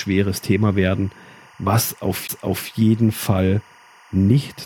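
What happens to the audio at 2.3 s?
At 2.27 s there is a CD skip. The player loses its place on the disc's spiral track, mutes for a very short moment of roughly 20 ms, then picks up the speech from a different point. You hear a small tick and an abrupt splice where the speech does not join smoothly. On a waveform this shows as a brief flat drop to silence followed by a sharp discontinuity. A spectrogram shows a thin vertical gap with a broadband click edge.

Running under that moment, and through the whole clip, is timecode bleed. A 24 frame-per-second linear timecode signal is leaking in from a neighbouring track or cable at about 30 dB below the speech. Its square wave flips between tones near 1 kHz and 2 kHz, which produces a steady, faint chirping warble. On a spectrogram it appears as two persistent horizontal bands near 1 kHz and 2 kHz. On the waveform it is a low-level buzz that stays visible even in the pauses.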